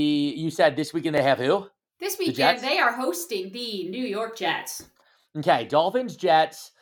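A brief stutter recurs every 2 seconds in the speech: at 1.18–1.20 s, between "said this weekend they" and "have who", at 3.20–3.22 s after "weekend the they are", and at 5.22–5.25 s. These are overlapping chunks: each 2-second block begins about 23 ms early, so that sliver plays twice at every join.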